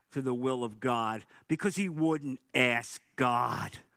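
No technical faults are audible in the speech, and the voice compression shows only a light coding texture, consistent with Opus at around 20 kbps.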